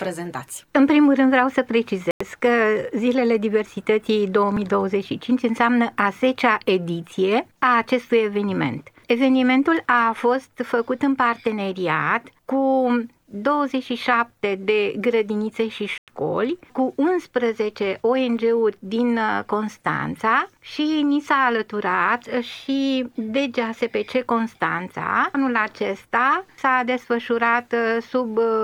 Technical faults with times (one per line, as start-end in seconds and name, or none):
2.11-2.21 Bluetooth stall
15.98-16.08 Bluetooth stall